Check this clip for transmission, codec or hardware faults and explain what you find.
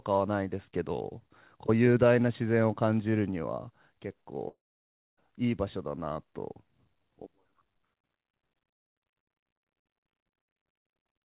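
One fault stands out in the speech, which comes through a narrow call-codec path with nothing above 4 kHz, consistent with G.711 mu-law. Long network dropout, 4.48 to 5.19 s: a likely loss of incoming packets removes about 0.7 s of audio. The receiver briefly stretches the last sound into a fading buzz, then about 0.61 s of near-silence follows before speech resumes with that stretch missing.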